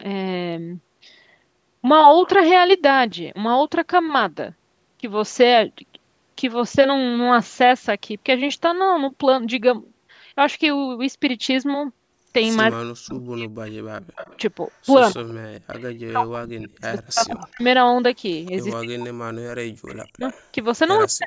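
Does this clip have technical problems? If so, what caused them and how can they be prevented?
Yes. Speech is suppressed in double talk at 12.69–13.96 s, 15.13–17.64 s and from 18.79 s to the end. The speech dips by as much as around 40 dB, losing about 1 s, 2 s and 1.5 s in total across the three spans. The likely cause is an echo canceller that could not tell the near talker from loudspeaker echo while both sides spoke, so it ducked everything. On a waveform the envelope collapses in chunks. A spectrogram shows energy vanishing or the upper band thinning. Prevention: use a headset, or a canceller with better double-talk detection.

Echo leak appears at 14.15–14.38 s, 15.29–15.34 s, 16.8–18.76 s and 19.9–20.46 s. A faint copy of the speech returns 144 ms late, at about 20 to 35 dB below the main speech. This likely comes from a far-end loudspeaker whose echo canceller left some residue and sent it back. 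A spectrogram shows a weak, smeared repeat of the harmonic patterns shifted right by 144 ms, under the 8 kHz ceiling of the call path. Prevention: lower speaker volume or use headphones on the far end.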